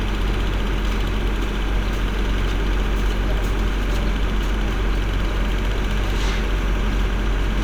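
No technical faults can be heard in the recording; the signal stays intact and consistent throughout.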